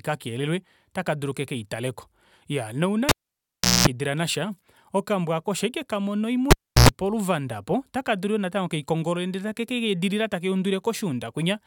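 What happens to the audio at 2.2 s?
Nothing goes wrong at 2.2 s; the speech carries on cleanly through that moment with no audible fault.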